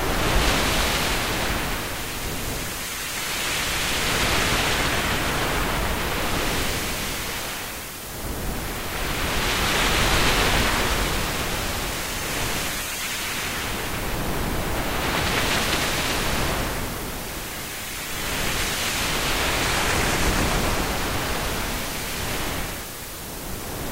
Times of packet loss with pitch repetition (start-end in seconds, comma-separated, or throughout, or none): none